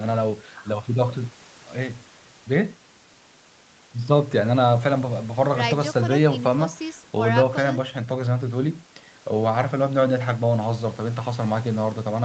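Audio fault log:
Nothing to log here; the speech sounds the way an ordinary call should, with the top end stopping at 8 kHz as the call path narrows it, and no faults turn up anywhere.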